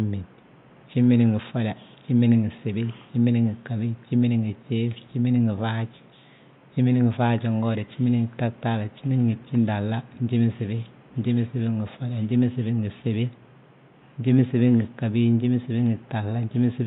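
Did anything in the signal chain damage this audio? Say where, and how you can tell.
No, nothing in the signal chain damaged this audio, and the only background sound is the room noise, sitting about 30 dB below the speech.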